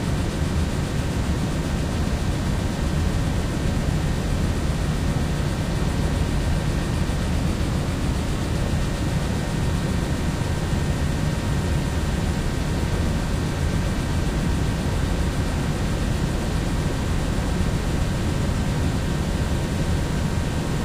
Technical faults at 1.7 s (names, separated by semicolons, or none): none